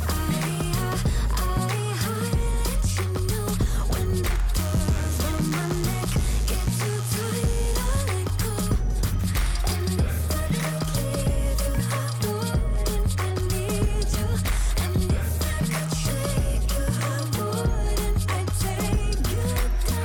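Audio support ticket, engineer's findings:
Steady raspy buzz, 4.57 to 8.02 s, sitting well below the main sound, roughly 20 dB down. Mains buzz at 50 Hz. Probable component: dimmer, rectifier or unshielded cable injecting sharp switching spikes twice per mains cycle. Spikes spread 50 Hz harmonics up into the kilohertz range, hence the rasp rather than a pure hum.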